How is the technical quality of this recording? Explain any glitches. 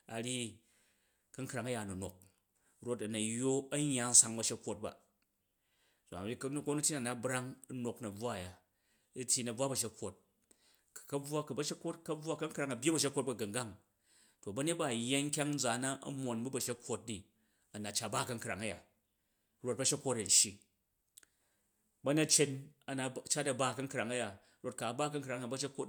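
Nothing here counts as a glitch; the speech comes through without any technical trouble worth pointing out.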